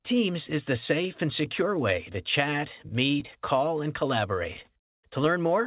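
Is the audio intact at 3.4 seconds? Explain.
No. Clock drift between sender and receiver runs through the whole clip. The sender's clock is about 3% slow, so the receiver's jitter buffer keeps draining and has to stretch the sound to stay fed. That leaves a slightly unsteady, dragging timing at 3.4 s.

Repeated timing corrections run from 1.04 to 5.11 s and cover this moment. The receiver slows playback to about 99% and repeats short pieces, adding around 50 ms in total. The result is small hiccups and a faintly uneven tempo.

Scattered short gaps fall between 2.13 and 3.81 s. Around seven gaps from late packets, each only a few milliseconds long, were patched by continuing the previous sound. They cause brief ticks or smears scattered through this stretch, with clear audio between them.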